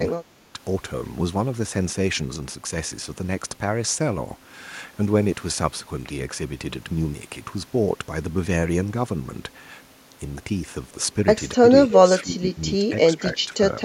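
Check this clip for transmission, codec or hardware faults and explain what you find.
The clip has one recurring fault: speech suppressed in double talk, at 0.24 to 0.59 s, 11.6 to 11.65 s, 11.87 to 12.5 s and 12.79 to 13.62 s. The likely cause is an echo canceller that mistook the talker for loudspeaker echo while the far side was also speaking, and turned both down. The speech dips sharply, by roughly 30 dB at the start and by smaller amounts, down to about 10 dB, in the later stretches.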